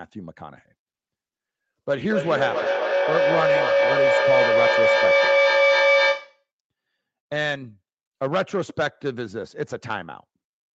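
From 2.1 s to 6.46 s a feedback howl takes over: the mic-to-speaker loop gains level on each pass, repeating about every 200 ms, so the sound narrows to a tone near 500 Hz, peaking about 5 dB above the speech. A spectrogram shows one bright horizontal band, and the waveform swells.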